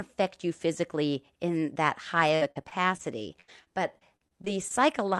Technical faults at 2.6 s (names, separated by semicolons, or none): repeated packet loss (robotic sound)